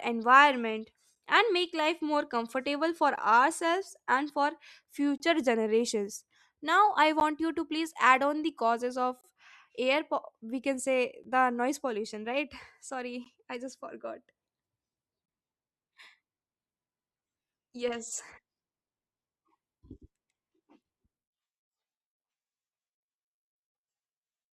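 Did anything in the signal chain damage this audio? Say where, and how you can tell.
Yes. At playback, consecutive 2-second stream segments leave gaps between their timestamps, which the player fills with silence. Hard-edged holes of 7 to 27 ms appear at 1.15, 3.16, 5.18, 7.20, 9.21, 11.24, 13.24 and 15.26 s, one between "life more comfortable for" and "ourselves and for".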